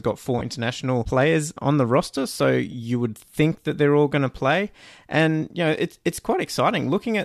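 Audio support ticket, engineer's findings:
Lost LE Audio frames at 0.39–0.41 s, 2.72–2.74 s and 6.16–6.18 s: brief grainy smears in the speech, consistent with one or two dropped 10 ms frames concealed by the LC3 decoder, likely over light LC3 compression.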